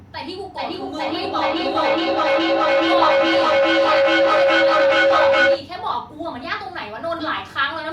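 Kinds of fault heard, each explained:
Feedback howl: from 0.58 to 5.75 s, a microphone hears a nearby loudspeaker carrying the same call, so each pass round the loop comes back louder. It narrows to a tone near 500 Hz, pulsing roughly every 400 ms, and peaks about 9 dB above the speech.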